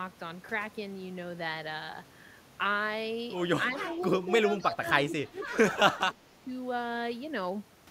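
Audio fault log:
3.80–3.87 s, 4.51–5.55 s and 5.75–6.47 s, speech suppressed in double talk: with both sides talking, the echo canceller likely mistook the talker for loudspeaker echo and turned it down. The speech dips by about 15 dB, and by about 25 dB in the last stretch, for roughly 0.07 s, 0.7 s and 0.5 s.
4.60–4.64 s and 5.37–5.46 s, echo leak: at a loudspeaker end, the echo canceller likely failed to remove all of its microphone pickup and sent the remainder back. Brief scraps of the speech return 261 ms late, faint at some 25 to 30 dB below the talker.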